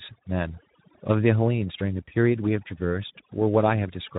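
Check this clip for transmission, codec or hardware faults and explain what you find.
Three faults are audible in this speech recording: two run through the whole clip and one brief dropout sits near the middle.

Overdone noise removal affects the entire clip. A noise suppressor set far too aggressively has pulled individual frequency bands down to almost nothing wherever they came close to its noise estimate, taking the softer parts of the voice with them. The background drops to near silence with scattered twinkling specks. On a spectrogram, the gaps between words look unnaturally black, dotted with isolated short blips. The speech itself shows ragged, patchy harmonics with holes where the weaker bands were removed.

Speex codec damage is also present throughout and is plainly audible. Speex is a CELP codec, and this clip's coarse quality fits a low-to-mid setting of roughly 11 kbps. 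At that rate, too few bits describe the excitation signal, so the voice sounds hoarse and grainy. Any content above 4 kHz is only a shaped noise fill rather than real detail. On a spectrogram, the upper band appears as a smooth, featureless haze above 4 kHz. Below it, the harmonics look smeared and noisy instead of crisp.

VoIP packet loss, concealed by the speech codec, occurs from 2.06 to 2.11 s. A gap of about 20 ms, which fits a single lost packet, was filled by the decoder extrapolating from its last pitch and filter while lowering the gain. The result is a short stretched sound that fades. Because each decoded frame depends on the one before, the voice stays weak or distorted until about 2.11 s. On a spectrogram, this shows as a short run of frozen, repeated spectrum. On the waveform, it appears as a dip in level that slowly recovers.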